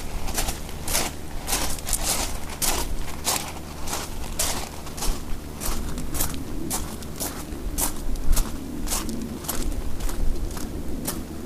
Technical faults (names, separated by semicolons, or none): video or display buzz